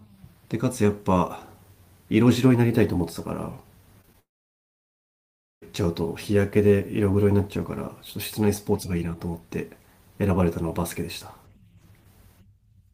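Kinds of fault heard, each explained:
Short concealed packet loss: three quick 20 ms gaps near 4.01, 4.05 and 4.13 s, patched by extending the previous sound, leaving a brief smeared wobble.
Long network dropout: from 4.2 to 5.64 s the sound stops, with a short fading fill and then about 1.4 s of silence, likely audio that never arrived.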